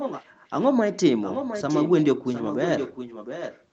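A faint, delayed copy of the speech trails the talker from 0.0 to 0.25 s, 1.22 to 2.07 s and 2.25 to 3.64 s, lagging by 712 ms and sitting roughly 10 dB quieter. This is echo leak, likely from a loudspeaker-side echo canceller letting its microphone pickup back into the call.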